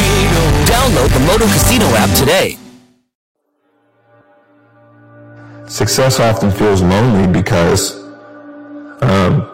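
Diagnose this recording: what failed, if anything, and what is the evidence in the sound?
Hard clipping runs throughout the recording. The input was driven about 18 dB past full scale at the converter or gain stage, so around a fifth of the waveform is sliced flat. Those squared-off tops add high harmonics, heard as a harsh fuzz on every loud passage.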